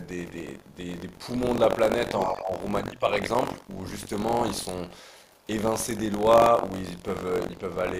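A steady robotic rattle at about 47 Hz rides on the speech throughout, vanishing in pauses. That is buffer tearing: writer and reader of the ring buffer cross inside each period, which fits a 1024-sample buffer, so around a tenth of each buffer repeats audio from roughly a tenth of a second earlier.

From 0.67 to 0.76 s a faint second voice, around 40 dB below the speech, slips through. This is the other side's voice leaking through, likely loudspeaker echo the canceller failed to remove from the microphone.

Between 2.2 and 2.56 s the speech dips in pieces, falling by roughly 15 dB at worst, over a few hundred milliseconds in all. This is speech suppressed in double talk, likely the echo canceller turning everything down while both sides spoke at once.

Inside that stretch, from 2.34 to 2.42 s, the leaking far-end voice is louder, only about 25 dB under the speech.

The same faint leak, around 40 dB down, returns briefly from 5.36 to 5.47 s and from 6.98 to 7.02 s.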